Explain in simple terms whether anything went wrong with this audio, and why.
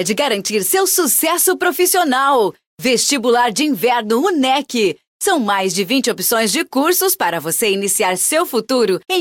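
Nothing went wrong with this audio, because nothing in it points to a technical problem.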